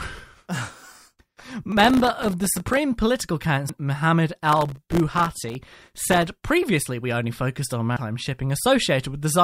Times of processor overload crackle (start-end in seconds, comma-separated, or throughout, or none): 1.72-2.77, 4.48-6.22